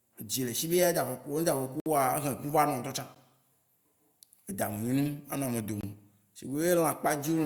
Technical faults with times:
1.80-1.86 block of digital silence
3.15 block of digital silence
5.81-5.83 block of digital silence

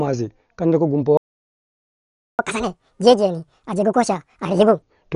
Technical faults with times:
0.00-5.16 Dolby Digital compression
1.17-2.39 playback stall
2.39-4.82 catch-up at higher speed

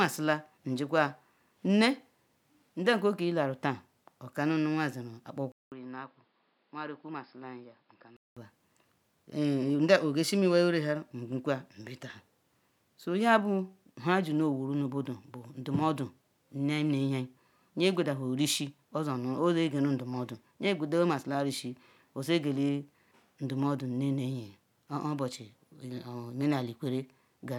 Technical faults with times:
5.52-8.37 input switched to a poorer device

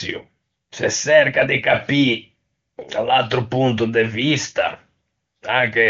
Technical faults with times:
none

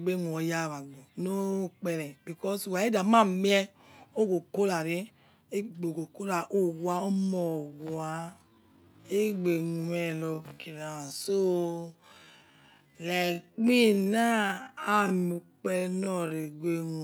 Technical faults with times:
7.10-17.04 time-stretched section

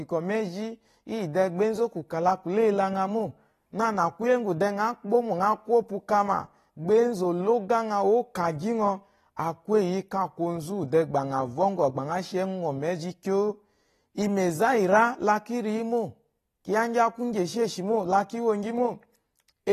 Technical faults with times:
0.00-19.72 AAC compression

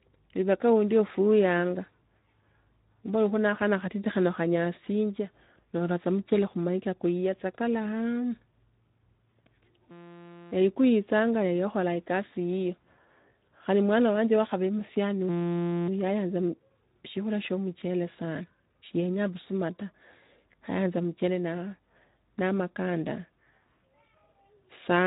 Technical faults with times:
0.00-25.06 Speex codec

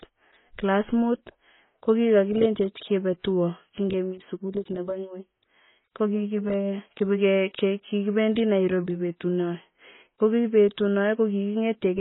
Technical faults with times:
0.00-12.00 transcoding between lossy codecs

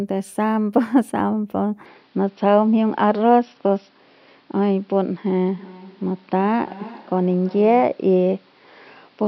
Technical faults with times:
1.86-9.27 input switched to a poorer device
5.53-8.04 feedback echo between two devices

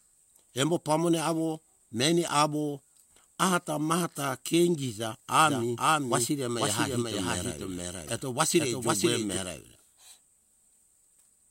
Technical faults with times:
5.44-9.37 doubled audio track
8.05-8.09 damaged data in a compressed stream

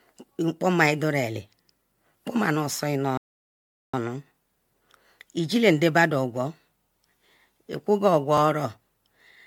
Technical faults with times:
0.00-9.46 generation loss
3.17-3.93 playback stall
4.35-4.38 overlapping chunks
8.38-8.40 overlapping chunks

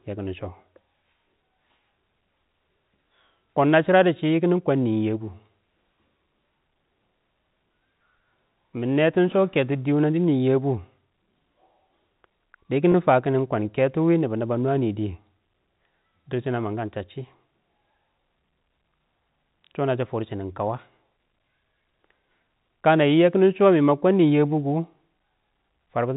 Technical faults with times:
2.96 packet loss with pitch repetition
12.92-12.94 packet loss with pitch repetition

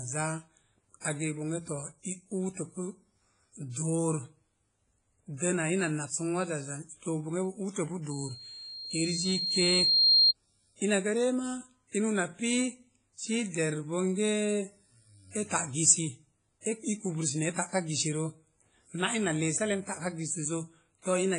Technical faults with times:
0.00-21.38 WMA compression
1.00-1.04 pre-echo
8.10-10.33 loudspeaker feedback squeal
16.61-16.65 pre-echo

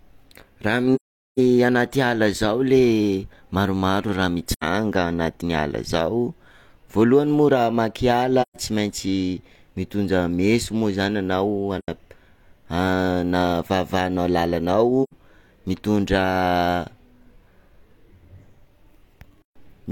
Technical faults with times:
0.95-1.39 AAC frame loss with muting
4.53-4.64 AAC frame loss with muting
8.42-8.57 AAC frame loss with muting
11.78-11.88 AAC frame loss with muting
15.03-15.14 AAC frame loss with muting

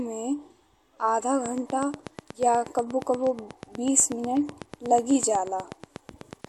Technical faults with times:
1.46-6.45 train of clicks

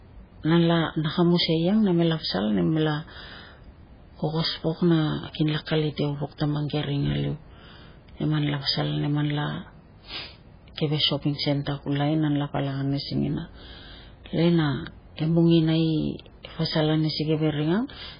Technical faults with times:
0.00-18.20 MP3 compression

